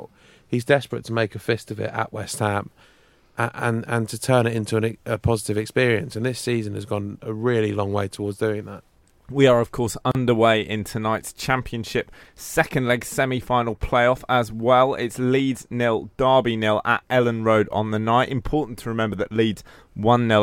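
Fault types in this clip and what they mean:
gap at a join of encoded pieces: two separately encoded chunks of this speech were butted together untrimmed, so encoder delay and last-frame padding stay in. You hear a sudden hole of about 34 ms at 10.12 s, right after "are of course", then it picks up at "in tonight's" exactly where it left off.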